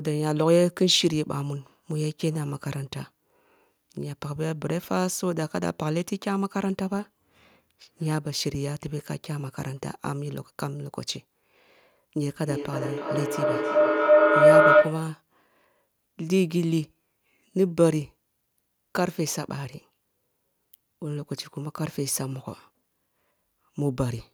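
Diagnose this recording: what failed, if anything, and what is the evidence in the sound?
From 12.3 to 15.22 s a tone near 700 Hz swells until it is about 10 dB above the speech, pulsing roughly every 300 ms. This is feedback howl at the call stage: two devices in one room loop microphone to loudspeaker, gaining level each pass.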